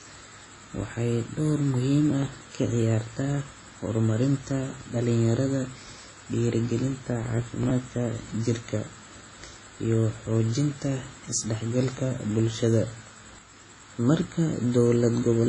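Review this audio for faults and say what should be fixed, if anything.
Heavy washy ringing and breathing hiss run throughout, with nothing above 10.4 kHz, which points to low-bitrate WMA compression (likely, around 24 kbps). Unlike dropout, it never stops. Re-encode from the source at a higher bitrate.

Processor overload crackle tears through the sound from 2.23 to 2.57 s, between "waxay door muhiim" and "ciyaartaa horumarinta dhalinyarada", and again from 7.24 to 7.71 s. Each is a run of skipped sub-millisecond buffers, and unlike a single dropout it is a gritty burst. Give the audio thread more headroom or use larger buffers.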